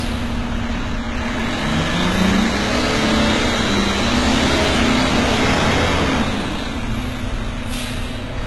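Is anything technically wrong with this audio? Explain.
Yes, there are two faults. Throughout, the treble sounds gritty and metallic. This is likely heavy HE-AAC compression at a very low bitrate, rebuilding the top end from copied lower bands. At 1.40, 4.64, 6.60 and 7.75 s there are single sharp clicks. Each is likely dropped samples, where a fraction of a millisecond goes missing and the waveform jumps.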